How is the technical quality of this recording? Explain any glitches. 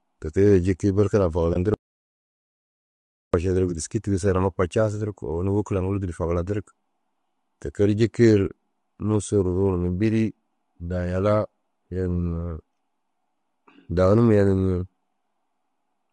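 The recording has audible codec damage throughout and three gaps near the start and in the middle.

Across the whole clip the speech sounds rough and grainy, with noise filling the spaces between the harmonics and a thin, somewhat synthetic top end. That points to low-delay AAC compression, likely AAC-ELD at a modest rate around 32 kbps. Its short frames can't resolve pitch harmonics finely, so the voice smears into grit. Unlike packet damage, it never lets up.

At 1.53 to 1.56 s, right after "jikii berke na", and again at 8.47 to 8.50 s, the sound fades out and back in over about 20 ms. This is AAC frame loss with muting, consistent with one lost frame each time. The decoder zeroed the missing spectrum, and the overlapping windows blended the edges, so it's a brief dip. It is far shorter than a dropout.

From 1.74 to 3.34 s, also following "jikii berke na", the audio drops out to silence for about 1.6 s. 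This is an audio dropout to silence, likely from a lost input or a mute while recording continued with silence. The speech cuts off mid-flow and returns abruptly. Unlike the brief AAC mutes, the gap is long and dead flat, with no room tone, and whatever was said then is gone.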